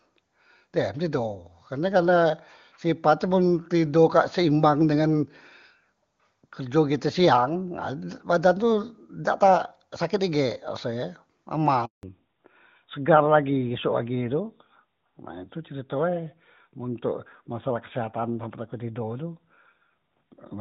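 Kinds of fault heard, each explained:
Handover gap: The call was passed between networks and no speech frames arrived during the switch, so the voice stops abruptly at 11.85 s and stays silent for about 180 ms until the new link carries audio again at 12.03 s.
Fallback to narrowband: At 12.03 s the call drops from HD Voice to a narrowband codec, which fits a switch from AMR-WB at 23.85 kbit/s to AMR-NB at 12.2 kbit/s. Nothing above 4 kHz survives, so the speech turns duller and rougher through to the end.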